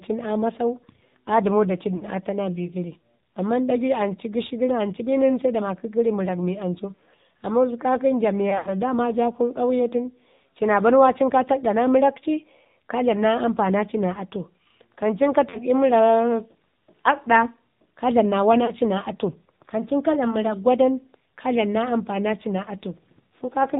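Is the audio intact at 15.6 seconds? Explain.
No. Lost AMR speech frames break the sound from 15.50 to 15.58 s: about 40 ms of missing data, which fits two 20 ms frames, is concealed by repeating the last pitch and vocal tract settings at falling gain, giving a brief dip and warble. Throughout, the AMR narrowband mobile codec at 7.4 kbps removes everything above 4 kHz and leaves the sound plainly buzzy and synthetic.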